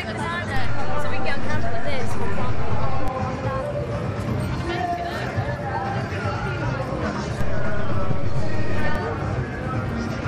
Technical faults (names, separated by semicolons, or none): DC step